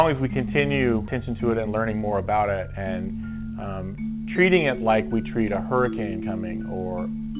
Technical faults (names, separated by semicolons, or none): skip ahead; jitter buffer speed-up